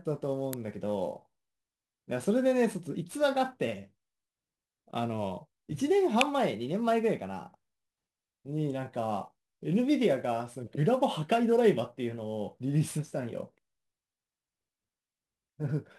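Sample clock jitter runs through the whole clip. The converter's timing wanders by roughly 10 microseconds, so each sample lands slightly early or late. That timing error turns into noise wherever the speech waveform changes fast. Here it sits about 25 dB below the signal. It sounds like a grainy hiss riding on the speech. It thickens on loud and bright sounds and falls away in the pauses.

At 0.53 s a sharp snap cuts in on top of the speech. It is over almost instantly. A second snap comes at 6.21 s. Both are electrical switching spikes. The likely cause is a nearby switch, relay or static discharge arcing briefly, with the audio line picking up the burst. Each is a sharp snap, separate from the steady jitter hiss.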